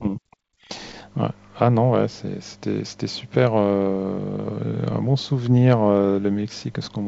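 Speech over a WebRTC call path, band-limited to nothing above 8 kHz in a way that fits the G.722 codec, with no technical faults to report.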